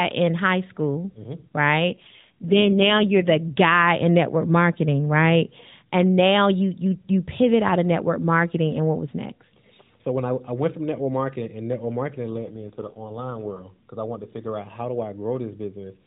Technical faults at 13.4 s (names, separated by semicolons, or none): AMR rate drop